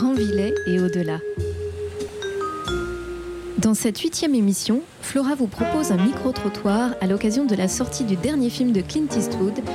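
At 2.09 s and again at 4.00 s, a repeated buffer produces a tiny click or brief buzz. New audio arrived late, so the same piece of about 1.33 ms, which fits a 64-sample buffer, was played several times back to back, holding up the sound by a few milliseconds. The repeats join at about 750 Hz. A simple dropout or single-sample glitch would give a toneless tick.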